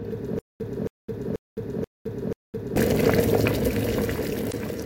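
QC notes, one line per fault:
0.39–2.76 s, stutter with silent gaps: the same 274 ms fragment plays five times, each followed by 211 ms of digital silence; likely a stalled stream replaying its last buffer.
4.48–4.53 s, damaged data in a compressed stream: a 52 ms glitch where corrupted frames throw the decoder out of sync until it locates the next frame header.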